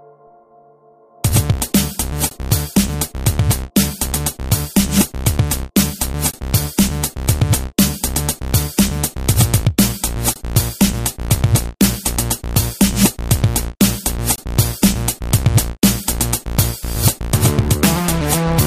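At 2.29–2.31 s, 6.31–6.34 s, 10.34–10.36 s and 14.36–14.38 s, continuous sound drops out briefly and resumes where it stopped. Each is a gap at a join of encoded pieces, about 20 to 23 ms long and repeating every 4.0 s. Separately encoded segments were joined without trimming, leaving encoder start-up delay and last-frame padding in the stream. Each gap has edges smeared by the codec.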